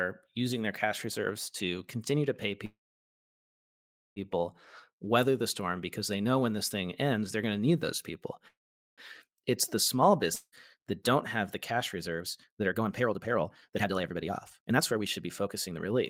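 A call audio freeze at 2.65 to 4.19 s, right after "to continue to pay", interrupts this speech clip: the last sound stretches into a brief fading buzz, then about 1.4 s of silence, and the speech resumes exactly where it stopped. The likely cause is packets held up in transit until the jitter buffer ran dry. The pause added about 1.5 s of delay without dropping any speech. A second call audio freeze at 8.48 to 9.01 s behaves the same way on a smaller scale, inserting roughly half a second, most of it (about 0.43 s) silent, with nothing lost. A long network dropout follows at 10.36 to 10.55 s, just after "the small". Here the fading tail and a short silence last only about 0.2 s, but when the audio returns, about 0.6 s of speech has gone missing, likely because those packets never arrived at all. Skipping that stretch pulls the playback delay down by around 0.4 s. Finally, a jitter buffer speed-up runs from 11.72 to 15.96 s, beginning after "have the": speech plays at about 132% of normal speed with unchanged pitch and sounds noticeably hurried. 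This is likely the receiver trimming a backlog of buffered audio by removing many short pitch-period slices in succession, about 1.5 s in total.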